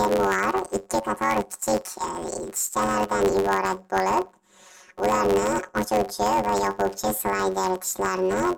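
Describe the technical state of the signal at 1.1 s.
At 1.1 s, planar audio read as interleaved runs throughout. 10.88 ms planar blocks read as alternating pairs give a robotic buzz near 92 Hz, with no octave shift.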